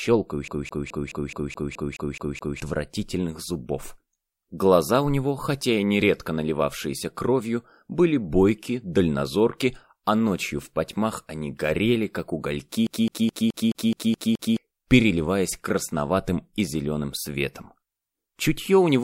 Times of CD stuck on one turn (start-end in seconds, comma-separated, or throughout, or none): 0.48-2.60, 12.87-14.57